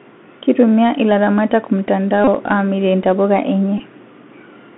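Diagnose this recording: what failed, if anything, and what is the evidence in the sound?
The Bluetooth CVSD headset codec is at work through the whole speech clip, at the codec stage. The sound is confined to roughly 150 Hz to 3.5 kHz, with nothing above 4 kHz. S sounds come out scratchy, loud bright passages break up, and a granular hiss sits under everything. That points to one-bit delta modulation at 64 kbps, whose adaptive step cannot keep up with steep waveforms. A plain telephone band-limit filter would narrow the band just as much but stay clean, without the hiss or slope distortion.

A Bluetooth headset packet repeated fault, in the radio link between headset and phone, shows up twice. The first is a short buzz from 2.24 to 2.28 s, lasting about 30 ms, which fits roughly eight lost packets. The second is a briefer one from 3.78 to 3.80 s, about 15 ms, which fits about four. Because the chip replays the last packet every 3.75 ms, each run comes out as a steady tone near 267 Hz rather than silence. 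A genuine dropout would leave a gap, and network concealment would smear the sound instead of buzzing.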